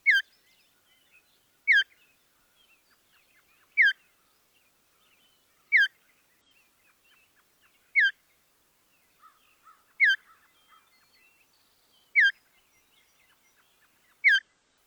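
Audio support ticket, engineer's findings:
Damaged data in the compressed stream. Three brief artefacts: one at 6.41 s, one from 8.78 to 8.82 s, one from 14.35 to 14.42 s. Component: the encoded file or stream, upstream of playback. Mechanism: corrupted bytes in those frames. The decoder misreads them, loses frame sync and hunts for the next valid header, emitting garbage until it locks on again. Durations of 10 to 66 ms fit one or a few frames.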